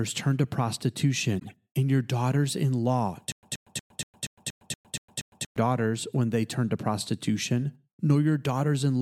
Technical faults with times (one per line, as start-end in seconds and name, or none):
1.39-1.54 corrupt frame decoded
3.32-5.56 stutter with silent gaps